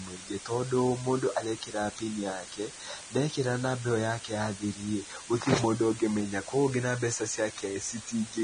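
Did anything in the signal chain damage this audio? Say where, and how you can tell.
Yes. A constant, even hiss runs under the speech for the whole clip, sitting only about 15 dB below it, yet the speech itself carries no crunchy or gated distortion. That combination points to the sample-format conversion stage. This is low bit depth with dither. The audio appears to have been rounded to roughly 6 bits with dither added first, so the rounding error comes out as steady white noise rather than distortion that follows the signal.

On top of that hiss, the speech sounds hissy and grainy throughout. Vowels are roughened, consonant onsets are smeared, and nothing is present above 9.7 kHz, so the top end stops at a hard ceiling. The likely cause is heavy Vorbis compression at the codec stage, at a setting that fits a low bitrate of around 25 kbps. The encoder lowered its cut-off and quantised the remaining treble so coarsely that fine detail was replaced by noise of similar energy.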